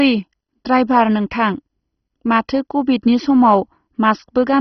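The whole speech clip has heavy MP2 compression, and you can hear it from the first syllable. Nothing comes through above about 6.1 kHz, so everything is dull and boxy. The cause is likely an MPEG Layer II encoder starved of bits, which fits a rate around 32 kbps. The encoder has shut off its upper sub-bands, and the bands that remain are coarsely quantised and flicker in and out. That gives the gurgling, grainy texture you'd know from cheap digital radio.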